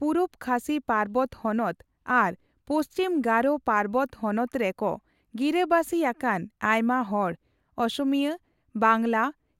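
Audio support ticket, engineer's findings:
No faults found on listening; speech clip reviewed in full, nothing to attribute to any component.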